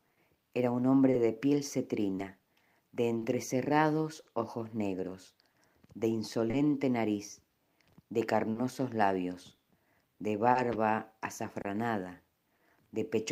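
Clock drift between sender and receiver runs throughout: the sender's clock is slow by roughly 3 percent, so irregular timing hiccups recur, seen as small splices or stretched cycles in the waveform. Scattered short gaps appear from 0.13 to 4.27 s (about five, none much over 40 ms) and from 5.51 to 12.61 s (about seven, up to about 30 ms). Each hole is filled by repeating the previous sound, heard as brief ticks or smears and shown on a spectrogram as short smeared, repeated columns.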